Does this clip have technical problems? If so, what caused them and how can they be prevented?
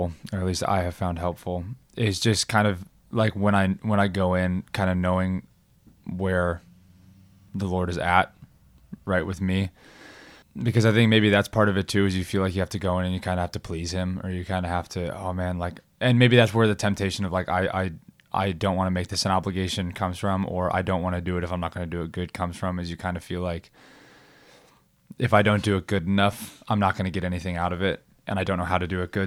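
No, nothing in this recording points to a technical problem. With no fault to trace back to a cause, no preventive step is needed.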